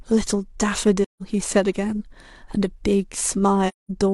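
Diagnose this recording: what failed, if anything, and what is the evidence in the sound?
AAC frame loss with muting in the codec at 1.04–1.22 s and 3.68–3.90 s: the decoder zeroed the lost frames, leaving soft-edged gaps in the speech.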